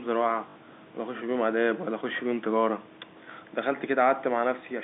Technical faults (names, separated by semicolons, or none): packet loss with last packet repeated